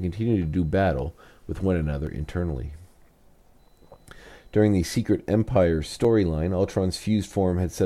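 At 2.07 s, just after "battle with one another", and again at 6.05 s, an overlap between stream segments removes a few milliseconds, so the audio makes a tiny skip. The 4 s spacing matches segment boundaries; the waveform shows a step discontinuity, the spectrogram a thin vertical broadband line.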